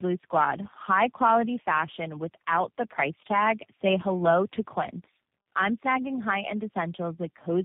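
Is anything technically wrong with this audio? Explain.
Yes. Tandem speech coding affects the whole clip. The speech seems to have passed through three speech coders in a row. The sound points to a chain such as AMR-NB, then CVSD, then G.729A, linked by G.711 hops. Each border decoded the speech and coded it again. Every coder then worked on the last one's damage. Nothing is heard above 3.6 kHz. The speech is muffled, rough and warbly.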